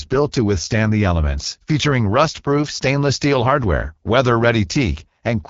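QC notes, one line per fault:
Throughout: AMR wideband (HD Voice) codec damage, plainly audible. The speech sounds rough and raspy, which fits one of the codec's lowest rates, around 8.85 kbit/s. The top band is filled with shaped noise rather than real detail, and nothing comes through above about 7.3 kHz.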